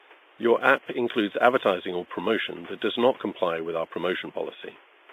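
From start to finish the speech carries heavy transform-codec damage, a ringing, washy quality with hiss that swells and fades along with the voice, most likely WMA compression at a low bitrate, around 24 kbps by the sound of it. On a spectrogram, quiet harmonics vanish into gaps and smeared blocks blur each onset, while the waveform shows pre-echo ahead of consonants. The room noise, about 30 dB below the speech, sits within that wash.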